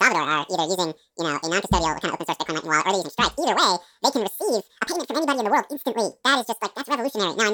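Speech throughout suffers from audio read two samples at a time (double speed): running twice as fast, an octave high, harmonics appear stretched upward on a spectrogram.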